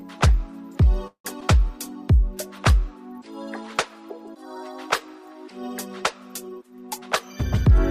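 At 1.07 s the sound stalls until about 1.26 s, and it's a call audio freeze, most likely because packets got held up in transit and the jitter buffer ran dry. The receiver stretched the last bit of sound into a fading buzz or hiss, then sat silent for about 100 ms before the real audio picked up exactly where it had stopped. Nothing's lost; you just get roughly 170 ms of inserted gap, which pushes everything after it that much later.

Right after, from 1.40 to 1.43 s, there's a short concealed packet loss. About 40 ms of audio never made it to the decoder. Only a sliver, around 6 ms, got patched by extending the preceding sound before blending back in, so what you hear is a quick smear or wobble with a bit of content simply gone. The timeline pulls back by a few tens of milliseconds, which partly undoes the delay the freeze added.

Near the end, 6.98 to 7.78 s, the jitter buffer speed-up kicks in. 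The buffer was holding more than it wanted, so the receiver snipped out lots of tiny pitch-period-sized pieces in a row, roughly a tenth of a second in total. The pitch stays put, but the audio runs at about 113% speed and comes across rushed.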